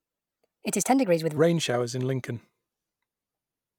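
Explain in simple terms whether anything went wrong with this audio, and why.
A section at the wrong speed, likely from being played on the wrong clock, runs 1.27 times too fast from 0 to 1.37 s, sounding hurried and several semitones high until "showers in".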